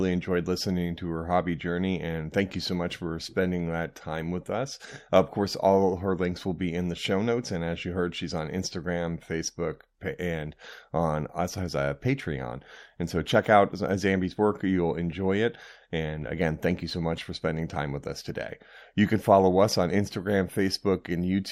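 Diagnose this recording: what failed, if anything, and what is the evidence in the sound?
Nothing in the chain has failed: the speech signal comes through intact at every stage from capture to playback, with nothing in the sound pointing to a fault.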